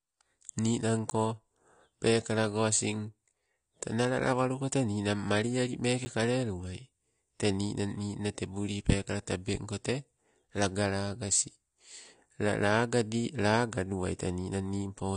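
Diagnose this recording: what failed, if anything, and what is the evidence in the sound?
The whole speech track sounds dull and a bit smeared, with nothing above about 9.9 kHz and a fizzy, warbly edge on sibilants. That's the codec stage: the damage is plainly audible and points to AAC compression, likely AAC-LC at a low rate that fits something around 32 kbps. At that budget the encoder pulls the cut-off down and quantises the remaining bands coarsely, so the top octave is gone and detail smears.

There are two dropouts, at 1.1 s and 6.05 s. Each is a block of digital silence about 10 ms long, heard as a tick or dip because the signal cuts out and comes back with no fade. That points to the driver or buffer stage. The program most likely didn't fill the output buffer in time, so zeros went out in place of audio.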